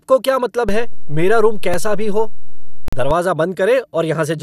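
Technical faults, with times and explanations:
0.69 to 3.11 s, DC step: the waveform's zero line jumps to a fixed offset at 0.69 s and stays shifted until 3.11 s, where it steps back. A sudden change in the baseline is a near-instantaneous low-frequency transient, so each edge is heard as a dull thump or click. The speech rides on top of the offset without changing, which fits a converter recalibrating or an offset-carrying input being switched in and out.
1.74 s and 2.88 to 2.93 s, block of digital silence: the signal drops to silence with no fade, for 2.3 ms at 1.74 s and about 43 ms from 2.88 s. The short gap registers as a tick, while the longer one is an audible hole in the speech. The 43 ms length points to a 2048-sample output buffer at 48 kHz that was not filled in time.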